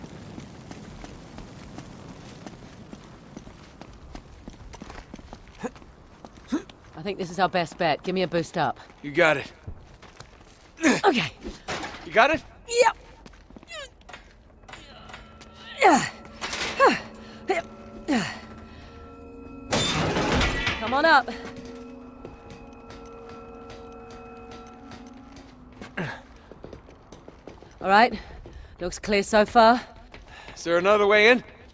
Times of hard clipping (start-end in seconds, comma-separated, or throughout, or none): none